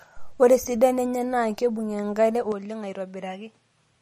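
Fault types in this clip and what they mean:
MP3 compression: Likely a low-bitrate MP3 encode, roughly 40 kbps by the sound of it. Nothing gets through above 14.1 kHz, and the weak frequency lines flicker in and out between frames, so the speech has a plainly audible watery, swirly edge, with sibilants going a bit metallic.
Input switched to a poorer device: At 2.52 s the sound turns duller and boxier and stays that way to the end. Nothing comes through above 11 kHz, the level drops a few decibels, and a faint new noise floor shows up, which likely means a switch to a worse mic. There's no gap at the changeover.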